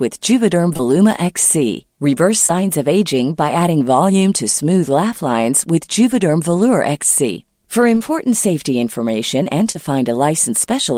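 Short concealed packet loss at 0.73–0.81, 2.47–2.51, 7.95–8.02 and 9.72–9.77 s: late audio, gaps fitting 20 ms packets, was filled by extrapolation, heard as brief smears or wobbles.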